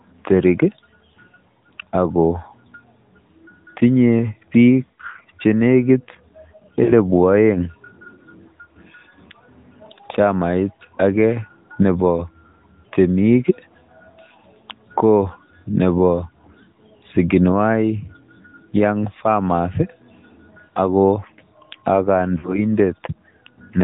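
AMR narrowband mobile codec compression runs through the whole speech clip. It band-limits everything to below 4 kHz and rebuilds the voice from a vocal-tract model excited by sparse pulses. The plainly audible buzzy, synthetic edge fits a mid-rate mode near 10.2 kbps.

Lost AMR speech frames occur at 4.94 to 5.00 s, just before "che nekiit", at 6.84 to 6.93 s, and at 22.38 to 22.62 s. The decoder filled the gaps by repeating its last good pitch and vocal-tract settings at fading gain. Each gap sounds like a short smeared warble or dip, the last one longer, pointing to about three frames.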